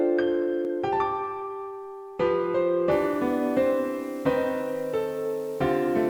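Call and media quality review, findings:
Low bit depth without dither, 2.91 s to end of clip (6.10 s). Grainy, signal-following distortion; quiet passages turn gritty, faintest detail sputters or drops out. Likely cause: requantisation stage rounding to about 7 bits with no dither. Error correlates with the signal, roughly 30 dB below it, so the grit tracks level and content.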